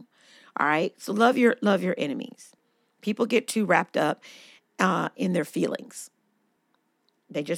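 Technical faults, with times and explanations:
2.59 to 6.57 s, periodic USB or driver dropouts: ticks every 2.0 s in the speech, as the stalled bus or driver skips roughly two milliseconds of audio.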